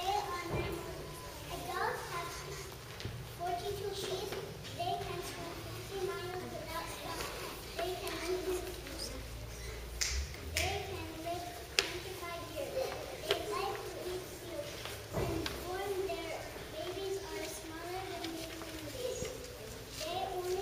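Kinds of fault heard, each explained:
Loud pop: a single sharp pulse sits on top of the sound at 2.72 to 2.75 s, peaking roughly 5 dB above it, and a stronger one at 19.22 to 19.25 s, roughly 10 dB above. Each lasts a couple of hundredths of a second and is likely a voltage step from a plug, switch or static discharge. Unlike a dropout or glitch, nothing is lost: the sound carries on unbroken beneath each thump.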